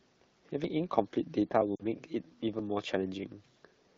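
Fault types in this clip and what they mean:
Lost AMR speech frames: radio errors wiped 40 ms of speech near 1.76 s, fitting two frames; the decoder's concealment fades it to near silence.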